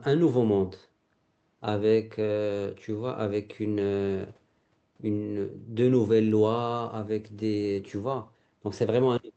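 Speech recording; no technical faults can be heard.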